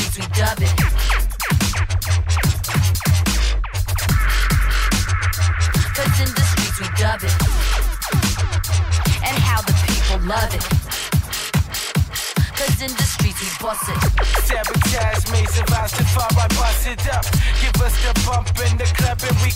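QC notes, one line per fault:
No faults found in this clip. The audio shows no problems anywhere along its length.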